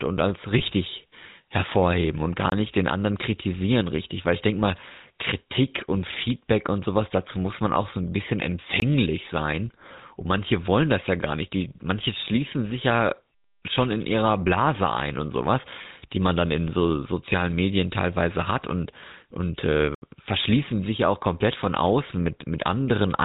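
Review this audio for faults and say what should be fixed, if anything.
The whole speech recording carries the GSM full-rate codec sound, a buzzy, gravelly roughness consistent with the 13 kbps full-rate coder. The codec rebuilds the voice from a vocal-tract model excited by a sparse, regularly spaced pulse train, so fine detail is replaced by a coarse texture. On a spectrogram, energy stops abruptly at 4 kHz and the harmonics look smeared and grainy. Keeping the source at a wideband or lossless stage instead of passing it through GSM would prevent this.

Lost GSM frames occur at 0.58 to 0.61 s and 15.82 to 15.87 s. Each points to a single lost 20 ms frame. The decoder filled the gap by repeating the last good frame's parameters, so the sound briefly freezes into a rough, metallic ring. On a spectrogram, the harmonic pattern stays flat across the gap instead of moving, and the waveform shows a short, repetitive stretch. 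Better error protection or retransmission on the link would prevent these.

Blocks of digital silence cut in at 2.50 to 2.52 s, 8.80 to 8.82 s and 19.95 to 20.02 s. The first two last 20 ms each. The last lasts 73 ms and is heard as a short hole. The output buffer was likely left as zeros, with no fade. On the waveform each is a near-flat line with vertical edges, and on a spectrogram it appears as a blank column. Larger buffers or higher processing priority would keep the output fed in time.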